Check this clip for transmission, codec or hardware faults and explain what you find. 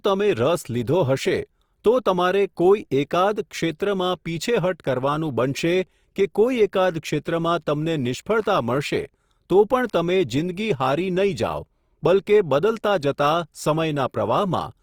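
Opus compression damage runs through the whole speech clip. The cause is likely an Opus encoder in its music mode, at a rate that fits roughly 24 kbps. Short of bits, it fills bands with folded or noise-like content. Speech sounds grainy and rough, with full bandwidth kept.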